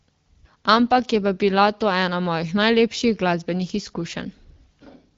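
Nothing wrong can be heard anywhere in this speech.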